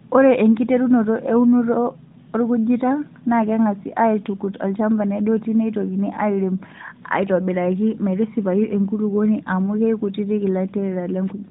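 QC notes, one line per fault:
Nothing stood out on listening to this speech recording.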